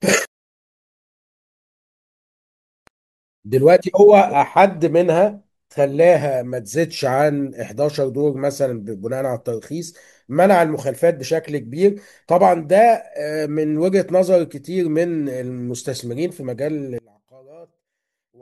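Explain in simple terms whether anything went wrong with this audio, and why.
Something does go wrong near the end. From about 16.98 s to the close at 18.42 s, the speech suddenly drops to a faint trace. The likely cause is one channel inverted: one side of the stereo signal is flipped upside down, so when the two sides are combined, the shared voice cancels itself out. Unlike a true dropout, the sound never goes fully silent. A faint remnant stays, which is the leftover difference between the two sides.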